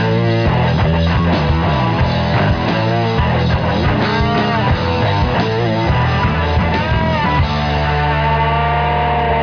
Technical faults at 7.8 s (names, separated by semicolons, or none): none